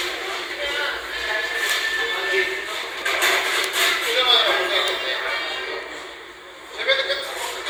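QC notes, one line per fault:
2.83–3.02 s, chunks out of order: a brief jumbled stutter. A roughly 46 ms chunk plays after the chunks that should follow it, which fits it arriving about three chunks late, so nothing is lost but three hard joins break the sound's continuity.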